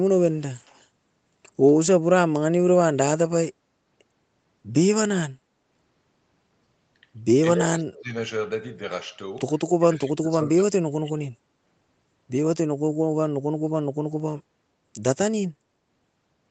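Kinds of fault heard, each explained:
Echo leak: a very faint copy of the speech returns about 235 ms late in two brief scraps, likely from a far-end loudspeaker echo the canceller failed to remove.
Speech suppressed in double talk: the speech dips deeply and drops out in pieces during two overlaps, likely the echo canceller turning down both talkers while the other side spoke.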